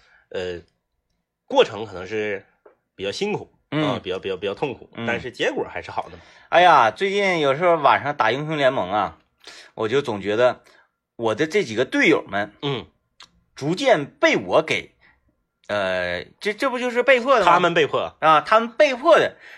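Nothing goes wrong anywhere in this recording; there are no dropouts, glitches or other technical slips to point to at any moment.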